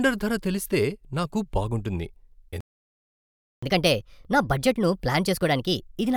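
Right after "ధర తెలిస్తే నాకు బాగుంటుంది", at 2.61 s, the speech cuts out for 1.02 s. This leaves a flat, empty stretch on the waveform, likely a playback stall where the player starved of data. From 3.63 s to the end, catch-up at higher speed plays the backlog 1.25 times fast, raising pitch about four semitones, with the spectrogram's harmonics shifted upward and syllables compressed.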